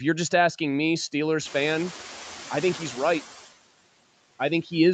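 Across the whole speech clip, the background sinks in the pauses and swells back under the talker. These are noise suppressor artifacts: the suppressor lowers the bands it judges to be steady noise, here by about 8 dB, frame by frame.

From 1.45 s, just as the room noise jumps by about 15 dB at around 1.5 s, the background suddenly comes through louder and less treated, then gradually settles down by 3.23 s. This is the noise suppressor catching up. Its noise estimate lags behind the rise, so it applies only about 5 dB of reduction at first and takes 1.78 s to adapt.

At 4.63 to 4.72 s, part of the speech is turned down and sounds swallowed for about a tenth of a second, falling by up to about 9 dB. This is speech cut by the noise suppressor: it mistook that stretch of speech for background and turned it down with the noise. Throughout, nothing is heard above 8 kHz, consistent with the Opus call path.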